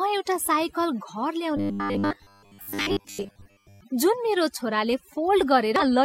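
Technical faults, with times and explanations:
Throughout: overdone noise removal. Background drops and breaks up into twinkling specks, steady over the whole clip rather than in bursts.
0.42 to 0.47 s and 5.76 to 5.82 s: damaged data in a compressed stream. Each brief glitch is the decoder losing sync on corrupt frames, unlike a robotic sound's sustained buzz.
1.57 to 3.81 s: robotic sound from repeated short buffers. A rigid metallic 100 Hz buzz still loosely follows the speech, likely from 10 ms chunks repeated while most real audio is skipped.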